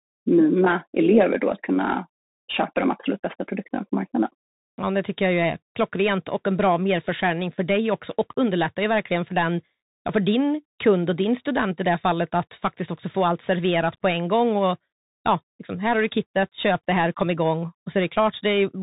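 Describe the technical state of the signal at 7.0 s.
At 7.0 s the speech carries the Bluetooth CVSD headset codec, present throughout: one-bit up/down steps cut everything above 3.8 kHz, and unlike plain telephone band-limiting, they leave granular hiss and scratchy s sounds.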